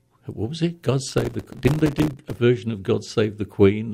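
From 1.09 s to 2.39 s the speech is overrun by processor overload crackle. The processor falls behind and misses deadline after deadline on its very short buffers, apparently only a few milliseconds each, and every missed buffer drops out to silence with hard edges. Around a hundred such tiny gaps stack into a gritty tearing riding on the sound. Unlike a single dropout or clipping distortion, it is a dense burst that stops cleanly once the load clears.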